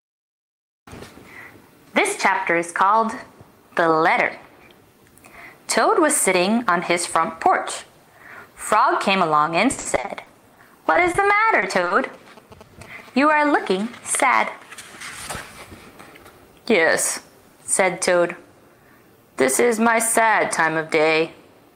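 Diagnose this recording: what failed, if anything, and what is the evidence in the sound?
Repeated packet loss (robotic sound), 9.71–11.24 s and 11.60–11.92 s, network stage: lost packets are patched by repeating the last sound, giving choppy gaps with pieces missing.

GSM signalling bursts, 12.14–13.57 s, analogue wiring: a nearby 2G phone's sparse radio bursts are rectified, producing a galloping dit-dit-dit of short 217 Hz buzzes roughly 20 dB below the sound.

GSM phone buzz, 13.60–15.72 s, analogue wiring: a phone in a call transmits 217 times a second, rectified into a steady, raspy 217 Hz buzz about 34 dB down.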